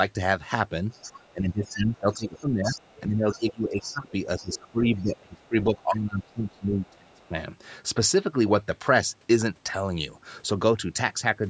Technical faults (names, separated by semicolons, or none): other side's voice leaking through; speech suppressed in double talk